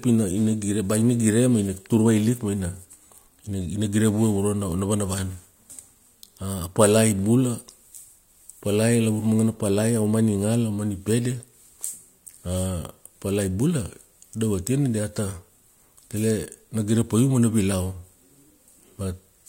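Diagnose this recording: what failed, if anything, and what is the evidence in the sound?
Nothing failed in this recording, and the sound offers no evidence of a fault.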